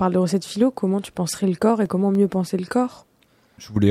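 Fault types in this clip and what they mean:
CD scratch ticks: A scratch on the disc destroys more data than error correction can rebuild, once per revolution. The player patches or mutes the damaged samples. Here the speech carries three brief ticks between 1.56 and 2.15 s, the longest lasting about 1.5 ms.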